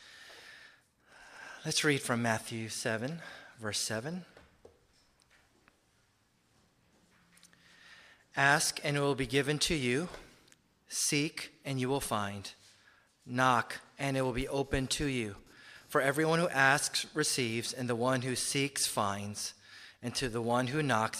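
From 14.13 to 18.46 s, computer activity noise gets into the audio path: shifting processor or graphics load pulls on the ground the audio circuit shares with the computer, and that fluctuation leaks into the signal. The result is a thin, buzzy chirp pulsing at around 200 times a second, sitting about 35 dB below the wanted sound. It follows the machine's workload, not anything in the audio, so it appears and stops independently of the sound.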